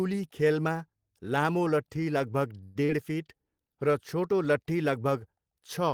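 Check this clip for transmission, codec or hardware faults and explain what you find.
Two transmission faults sit close together near the middle of the speech.

From 2.63 to 2.77 s there is what sounds like a call audio freeze, likely caused by packets stalling in transit and draining the jitter buffer. The receiver stretches the last sound for about 115 ms as a fading buzz. The speech then resumes intact, running 115 ms later than before.

From 2.85 to 2.90 s comes a short concealed packet loss. About 40 ms of audio never reached the decoder in time, and the receiver covered the hole with 35 ms extrapolated from the preceding sound before blending back into the real signal. The result is a brief smear or wobble.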